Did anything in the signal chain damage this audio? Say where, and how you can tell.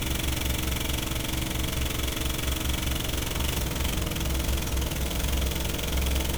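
Yes, at the codec stage, throughout the clip: repeated MP3 re-encoding, or generation loss, likely from around seven passes at a rate near 128 kbit/s. The swirly, hollow texture and blurred attacks are worse than one encode would give, yet content still reaches 20.9 kHz, so this isn't simple low-bitrate bandwidth loss.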